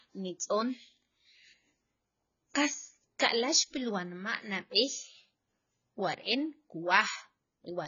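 AAC compression, running from the start of the speech to the end: the audio is cut off with nothing above 7 kHz, and the sibilants and sustained sounds carry a fizzy, warbling smear, which points to heavy AAC-LC coding at a low bitrate, likely around 16 kbps. Starved of bits, the encoder dropped the top band and coarsely quantised what remained, making the speech sound dull and watery throughout.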